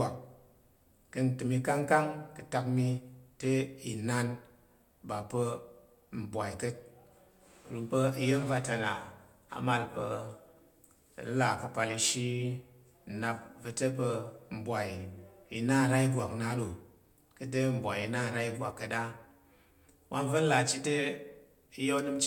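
No technical faults can be heard anywhere in the speech.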